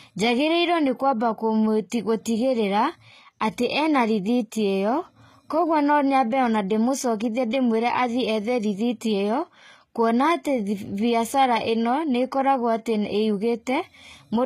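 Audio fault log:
Throughout: HE-AAC compression, likely. The codec damage is plainly audible across the speech. The treble is rebuilt from copied lower bands, not coded directly, so sibilants sound gritty and metallic. Nothing sounds above 14.9 kHz, which fits a low bitrate near 20 kbps.
7.51 to 7.53 s: pre-echo. A short hiss lasting 21 ms comes just before a sharp attack. The codec spread its noise over the whole block, so noise meant for the loud onset fills the quiet moment ahead, and the attack smears.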